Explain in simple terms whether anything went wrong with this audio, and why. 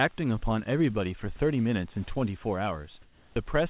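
Near the end, from 3.02 to 3.36 s, the room sound in a pause is replaced by a flat, even hiss that is a little quieter than the real background, then the sound resumes. This is comfort noise in place of the background. The likely cause is that the sending side stopped transmitting during the pause and the receiver filled the gap with artificial noise. Through the call path, the audio also carries nothing above 4 kHz.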